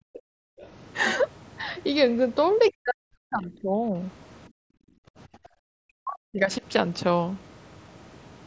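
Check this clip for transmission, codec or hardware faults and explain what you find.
Three kinds of echo-canceller fault appear, all from a call chain whose speech stops at 8 kHz, consistent with the mSBC wideband headset codec.

Background gated by the echo canceller, 0.00 to 0.59 s and 4.49 to 5.66 s: the room sound falls away almost to silence, at its deepest about 39 dB down, then returns. The canceller clamped the microphone hard while its loudspeaker was active.

Other side's voice leaking through, 0.15 to 0.19 s and 0.59 to 0.68 s: brief, faint scraps of a second voice sit well under the talker, roughly 25 to 30 dB lower. The likely cause is loudspeaker playback that the echo canceller failed to fully remove from the microphone.

Speech suppressed in double talk, 2.71 to 3.94 s and 5.94 to 6.62 s: the talker's voice sinks sharply, by around 40 dB at its worst, and comes back once the overlap ends. 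Both sides were likely speaking at once, so the canceller turned everything down.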